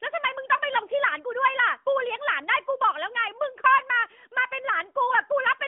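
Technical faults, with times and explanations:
No technical faults detected.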